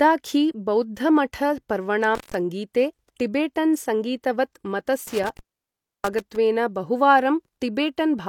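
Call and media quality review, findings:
Intermittent contact, loose cable or plug in the capture path. Line opens briefly and speech drops out with crackle at the edges. 2.15–2.34 s, open 139 ms; 5.07–6.36 s, open 651 ms, the longer break.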